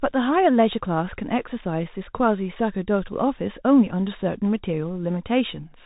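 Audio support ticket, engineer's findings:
Dull, boxed-in speech throughout, nothing above about 3.8 kHz, with plainly audible coding roughness riding on the speech. Bluetooth CVSD headset codec, fits a 64 kbps link. Mechanism: one-bit up/down slope tracking with adaptive step size, narrowband headset path, so the top end is cut and the waveform is only approximated, leaving grainy damage. Suspect the headset on the narrowband voice profile instead of a wideband one.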